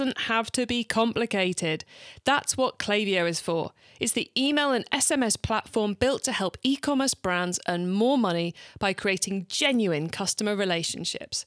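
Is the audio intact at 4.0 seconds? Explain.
Yes, the speech at 4.0 seconds plays through cleanly, with no dropout, click, distortion or other fault at that moment.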